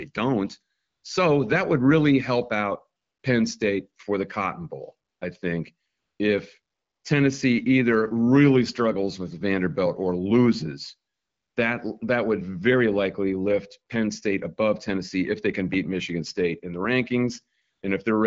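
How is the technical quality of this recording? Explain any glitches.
The recording has one recurring glitch: AMR comfort noise. It appears in seven short pauses, at 0.77–1.03 s, 3.01–3.23 s, 5.09–5.21 s (just before "I think if"), 5.87–6.19 s (just after "I think"), 6.61–7.03 s, 11.13–11.55 s (just after "or loses") and 17.61–17.81 s. Each gap lasts between 120 and 420 ms. The phone decided the talker had stopped and sent no speech frames. The receiver then generated smooth synthetic noise from a rough level and spectrum estimate. The real background is replaced by a steady hiss that switches in and out. The speech itself carries the light coding of AMR-WB (HD Voice), clear in a way that fits a 12.65 kbit/s mode.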